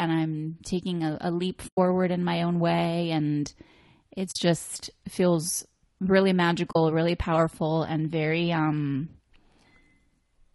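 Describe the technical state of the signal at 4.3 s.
At 4.31 s the audio drops into a short silent gap that lasts until 4.36 s, about 40 ms, just before "just feels really". This is AAC frame loss with muting. The decoder had nothing to play for that stretch, which fits two missing frames, so it filled them with silence. Because the codec's overlapping windows still blend into the gap, the sound fades out and back in over a frame rather than cutting off. That soft-edged hole is what sets it apart from a hard dropout or a packet glitch, which snap off with a tick at each edge.

Around that gap the speech is rough and grainy, with noise filling the spaces between harmonics and a thin, synthetic top band. This points to low-delay AAC compression, likely AAC-ELD at a low bitrate near 32 kbps. Its short frames resolve pitch structure poorly, so the damage is a steady codec texture present throughout, not a single event like the muted gap.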